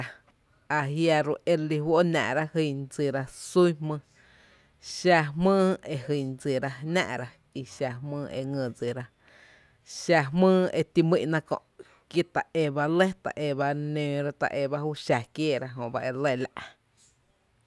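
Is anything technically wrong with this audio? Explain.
No, nothing technically wrong can be heard in this speech clip. There is no fault at any point to point to.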